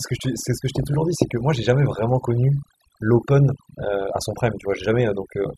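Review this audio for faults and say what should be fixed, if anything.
Overdone noise removal runs through the whole speech recording. The reduction stage is cutting individual frequency bands hard whenever their level sits close to its noise estimate, so the floor between phrases drops, leaving scattered twinkling specks where isolated bands pop in and out. Low-level parts of the voice fall under the same threshold and are stripped along with the noise. To prevent it, reduce the suppression depth and process the noisy source again, stopping while a little natural background remains.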